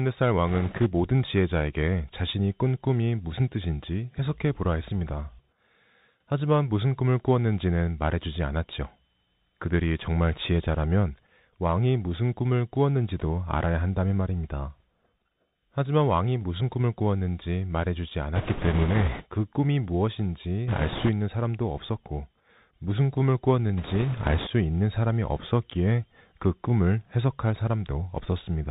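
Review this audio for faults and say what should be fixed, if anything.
The speech runs through a Bluetooth CVSD headset codec the whole way. It sounds like a 64 kbps link. Each sample is a single up-or-down bit, and the step size adapts to follow the signal. Nothing above 4 kHz gets through, so the sound is narrow and boxy. Loud, bright sounds outrun the step and distort. S sounds turn scratchy, and a fine granular hiss sits underneath. To avoid this, record on the device itself or use a wideband headset mode.

Bit errors on a Bluetooth voice link show up in four bursts. They fall at 0.47 to 0.87 s, 18.35 to 19.25 s, 20.68 to 21.10 s, and 23.78 to 24.48 s. Flipped bits each nudge the signal only slightly, and the damage fades fast. So instead of sharp clicks there is a rushing, crackly noise over the speech. It is worst around 18.4 to 19.2 s, where the error rate sounds heaviest, roughly one bit in ten. 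A closer headset with less radio interference would prevent these.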